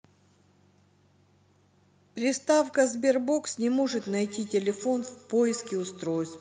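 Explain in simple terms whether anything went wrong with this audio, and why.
From 3.8 seconds to the end, the speech picks up a feedback echo between two devices. Two devices in the same room seem to share the call. One plays the other's sound, and that microphone hears it again. Each word returns roughly every seventh of a second, thinner each time.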